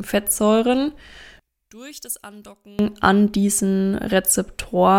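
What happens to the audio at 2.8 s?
At 2.8 s the speech returns to full level just before "an diesen", ending a faint stretch that began at 1.40 s. From 1.40 to 2.79 s the level falls by about 22 dB, most likely because one stereo channel is inverted and the two sides cancel when summed to mono. Unlike a dropout or a plain gain dip, the sound never goes silent and doesn't just get quieter. A faint residue remains, which is the difference between the channels.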